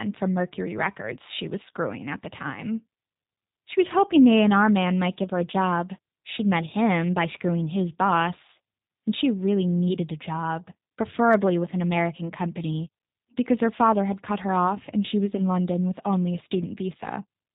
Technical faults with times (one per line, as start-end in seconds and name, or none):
0.00-17.55 G.729 codec